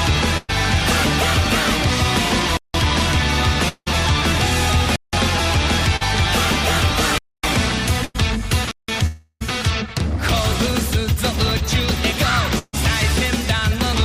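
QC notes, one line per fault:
0.37–0.51 s, 8.05–8.16 s and 12.59–12.75 s: burst of packet loss. About 100 ms of audio goes missing at the first two and about 140 ms at the third. Each time the receiver stretches the last sound into a held buzz or hiss that fades out, and the audio resumes further along with the stretch in between gone. At 12.59 s the fade runs about 30 ms of silence before playback returns.
2.57–2.74 s, 4.96–5.13 s, 7.18–7.44 s and 8.71–8.88 s: block of digital silence. The output drops to silence with no fade in or out, leaving a short hole. Three of these holes last about 171 ms, which fits an 8192-sample buffer at 48 kHz going unfilled in time. The one at 7.18 s is longer, about 256 ms.
3.69–3.88 s and 9.06–9.43 s: long network dropout. The sound stretches into a fading buzz or hiss, thins to about 50 ms of silence, then jumps ahead. About 180 ms is lost at the first and about 340 ms at the second. 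The likely cause is a stretch where no packets arrived and the receiver had only its own fill to play.
5.96–6.03 s: short concealed packet loss. About 40 ms never reached the decoder in time. The receiver bridged it by extending the preceding sound and then blending back into the real signal, so it registers as a brief smear or wobble rather than a clear gap.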